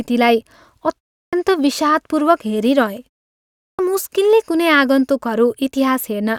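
At 1.22 s and again at 3.67 s you get a clipped start after a pause. The output path seems to drop into a low-power state during silence, and it takes a moment to come back, so the opening of the next phrase gets eaten. The first cut comes after a 0.3 s gap and loses about 107 ms. The second comes after 0.66 s and loses about 118 ms. Both times the speech just pops in without its first sounds.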